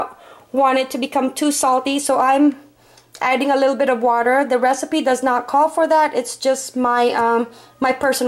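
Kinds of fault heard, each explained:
No kinds of fault are heard in this clip.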